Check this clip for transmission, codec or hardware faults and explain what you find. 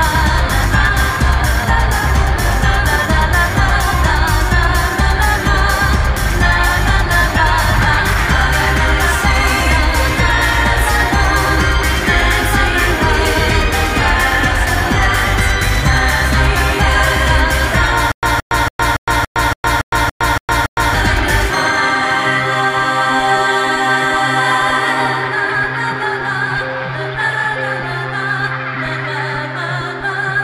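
One fault is present. Stutter with silent gaps, 18.12 to 20.94 s: likely a stalled stream replaying its last fragment, so a 172 ms burst repeats ten times, separated by 110 ms of digital silence.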